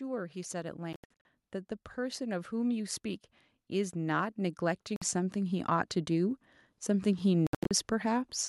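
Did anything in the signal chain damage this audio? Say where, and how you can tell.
Yes. The gaps point to the wireless link to the headphones, with a Bluetooth dropout the likely cause. Between 0.93 and 1.25 s the sound cuts out in several bursts, losing about 0.23 s in all, with the longest hole 80 ms. A single 53 ms gap follows at 4.96 s. Then 7.47 to 7.71 s loses 0.2 s, again in bursts of up to 80 ms. Each hole drops to silence, and the sound picks up where it would have been had it kept playing. A codec glitch would smear instead.

There is also automatic gain rising in call processing. From 1.96 s to 8.33 s the level climbs slowly by about 11 dB. The voice and the background noise swell together over several seconds, which shows a gain stage turning up rather than a talker getting louder or moving closer. A talker's change would lift the voice alone. The slow, steady ramp also separates it from a sudden step in level.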